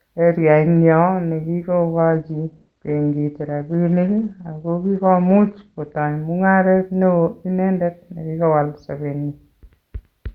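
From about 1.99 s to 5.99 s the speech drops to a lower-bitrate rendition of an adaptive stream. Everything above 6.4 kHz vanishes, sibilants go dull, and codec artefacts thicken. That fits Opus stepping from roughly 64 to 16 kbit/s. Both switches are abrupt but gapless.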